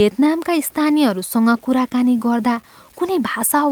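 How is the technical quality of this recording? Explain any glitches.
Technical quality is poor: the speech carries grainy distortion and an unsteady, dragging timing from start to finish.

Low bit depth without dither runs throughout. Quiet passages sound gritty and the softest parts sputter or drop out, with error sitting roughly 35 dB below the signal. This likely comes from truncating to about 7 bits with no dither. A waveform shows visible stair-steps, and a spectrogram shows broadband hash tracking the speech.

Clock drift between sender and receiver also spans the whole clip. The sender's clock runs about 4% slow, so the receiver's buffer keeps starving and has to stretch the audio. On a spectrogram, harmonic tracks show small breaks and smeared repeats at irregular spacing.

Repeated timing corrections run from 0.02 s to 3.66 s, playing the speech at about 96% speed by repeating short slices, which adds around 150 ms overall. 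Each edit is small, heard if at all as slight hiccups or an unsteady tempo. The waveform shows duplicated fragments joined at uneven seams.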